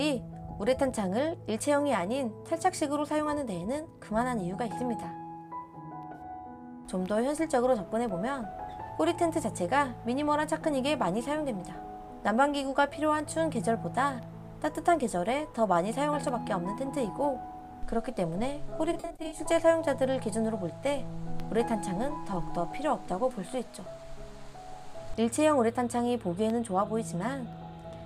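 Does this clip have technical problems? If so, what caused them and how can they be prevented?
Yes. Evenly spaced ticks occur every 1.02 s from 0.92 s to 27.53 s. These are periodic USB or driver dropouts, each replacing a fraction of a millisecond of sound with silence. Prevent them by removing the background task that stalls the bus or driver, or by using a dedicated USB port and larger buffers.

Short smeared, noisy patches appear at 6.15–6.22 s (about 43 ms) and 18.93–19.39 s. The later patch loses about 213 ms in runs up to about 40 ms. This is AAC frame loss with concealment, where the decoder guesses the missing audio. Prevent it with a more reliable transport or with error protection and retransmission.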